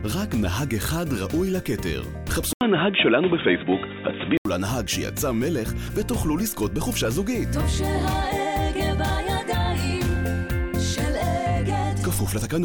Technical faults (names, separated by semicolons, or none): input switched to a poorer device